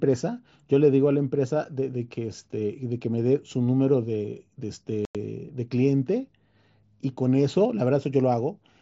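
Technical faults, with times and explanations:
5.05–5.15 s, unconcealed Bluetooth headset packet loss: about 98 ms of speech vanishes, which fits a run of consecutive headset frames lost with nothing patched in, so the sound cuts out and resumes abruptly. The waveform shows a flat, sharp-edged gap, and the spectrogram shows a blank vertical column.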